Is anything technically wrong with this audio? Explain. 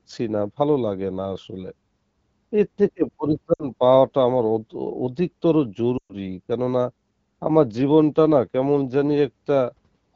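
Yes. Lost AMR speech frames at 3.53–3.65 s (about 60 ms) and 5.97–6.14 s (about 120 ms): corrupted frames made the decoder repeat the last good pitch and spectral settings at falling gain. The speech smears, then fades. The waveform shows a decaying envelope, and the spectrogram shows frozen, stretched harmonics.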